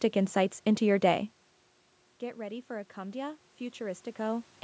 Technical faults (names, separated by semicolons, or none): automatic gain rising